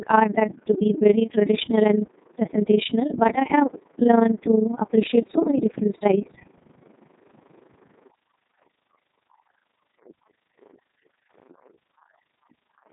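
From start to finish, the speech runs through a Codec 2 vocoder. The waveform itself is not carried. Only pitch, voicing, energy and a rough spectral envelope survive, and the decoder rebuilds the voice from sine waves. The damage is heavy. The voice sounds robotic and buzzy. The detail that remains fits the codec's top 3.2 kbit/s mode.

An overlap-add ripple also runs through the whole clip. The audio was split into windowed frames and joined again. The overlapping windows do not add up to a steady gain. So the level swells and dips once per frame, by about 11 dB. That happens around 30 times a second. It is heard as a fast, rough flutter, a tremolo laid over the already buzzy voice.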